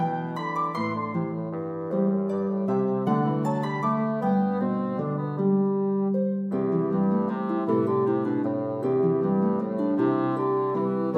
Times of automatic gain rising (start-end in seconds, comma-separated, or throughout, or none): none